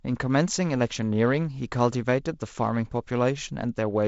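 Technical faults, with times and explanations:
Nothing here counts as a technical fault, just ordinary G.722 wideband telephone coding at 48 kbit/s, which leaves a light coding hiss and nothing above 7.7 kHz.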